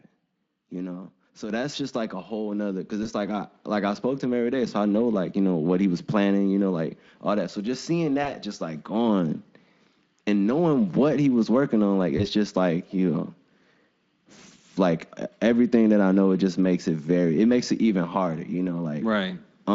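Microphone volume stepped up at 1.50 s and again at 2.52 s, between "just like a whole" and "nother because": the call software raised the input gain in single steps of about 6 dB and then about 2 dB, so the voice and background jump louder together.

VoIP packet loss concealed by the speech codec occurs at 3.03–3.09 s, after "a whole nother because" and before "like I like I"; at 8.23–8.33 s, after "just seeing" and before "just like gone"; and at 12.17–12.27 s. Each gap is about 20 ms of missing audio, which fits a single lost frame. The Speex decoder fills it by extending its last pitch and spectral shape with falling gain, stretching the sound into a brief fading tone or noise. Because each frame builds on the one before, the sound stays weakened for a short time after the audio resumes.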